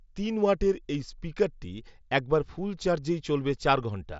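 No technical faults occur at any point in the speech.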